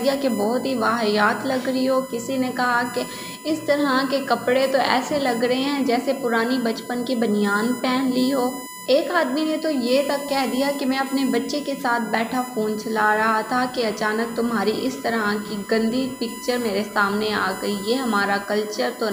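A steady, fixed-pitch whine at 1 kHz runs under the whole clip from start to finish. It sits only about 15 dB below the wanted sound, so it is plainly audible and strongest at that fundamental. This is USB whine: the bus pulls current in regular 1 ms frames, and that repeating load leaks into the audio through shared power or ground wiring, printing its 1 kHz frame rate onto the signal as a constant tone.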